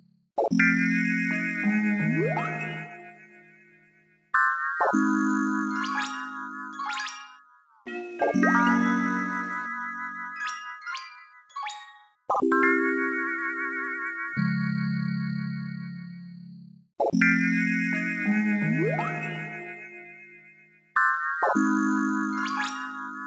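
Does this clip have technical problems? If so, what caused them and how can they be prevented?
Yes. Across the whole clip the sound pumps and thins out, with held tones and decaying tails sinking while sharp onsets pass, a level swing of around 10 dB. This is a noise suppressor applied to music or sounds: a suppressor tuned for speech treats steady, sustained content as noise and keeps pulling it down. To prevent it, switch noise suppression off, or use a music or original-sound mode, whenever the source isn't speech.

At 0.00–0.27 s, 2.87–4.33 s, 7.30–7.86 s, 11.09–11.56 s and 20.26–20.95 s, the sound dips audibly, by about 13 dB at its deepest in the first two, about 12 dB in the next two and about 10 dB in the last. This is sound cut by the noise suppressor, which judged these stretches to be noise and attenuated them harder than the surrounding audio. The same fix applies: disabling or bypassing the speech noise suppressor for non-speech material stops these drops.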